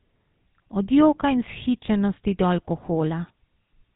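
From start to finish the speech carries GSM full-rate codec damage, plainly audible. The vocal tract is modelled and driven by sparse, regularly spaced excitation pulses, giving a buzzy, gravelly roughness, at a rate that fits 13 kbps. A spectrogram shows nothing above 4 kHz.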